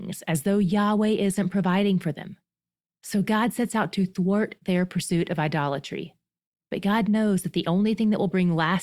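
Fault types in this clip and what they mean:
No technical faults can be heard anywhere in this speech recording; the signal stays steady and intact throughout.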